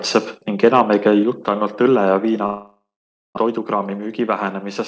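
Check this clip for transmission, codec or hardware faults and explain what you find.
Four faults are present in this speech clip: a clipped peak, a sudden level drop, a long gap in transmission, and a stretch of accelerated playback. The call path itself, G.722 with nothing above 8 kHz, is audible only as its usual coding noise and the expected band limit.

From 0.64 to 0.81 s, just before "ei käi jutt ainult", there is microphone overload. The input gain was likely set too high, so the loudest peaks ran about 2 dB past the converter's ceiling and a small share of samples were flattened at the converter's limit. Those squared-off tops add a brief harsh, crackly edge to the loudest part of that passage.

At 1.23 s, between "ei käi" and "jutt ainult õlle", the microphone volume is stepped down. This is likely the call software reacting to that earlier overload by cutting the device's input gain in a single jump of about 4 dB. 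The voice and the room noise behind it drop together at that instant, so the level change is abrupt rather than a natural softening of the speaker.

From 2.46 to 3.39 s there is a long network dropout. Roughly 0.78 s of audio failed to arrive, and the receiver tried to bridge the hole by extending the last received sound. That stretched sound decays into a fading buzz or hiss, and about 0.52 s of near silence follows before speech resumes with the lost portion simply gone. The gap likely also added around a tenth of a second of buffering delay.

From 3.47 to 4.64 s the jitter buffer speed-up works off that accumulated delay. The receiver repeatedly snipped out short pitch-period-length pieces, about 100 ms in total, so playback runs at roughly 106 percent speed. Pitch stays the same, but the speech in this stretch sounds slightly rushed, with syllables crowding closer together than the speaker's natural rhythm.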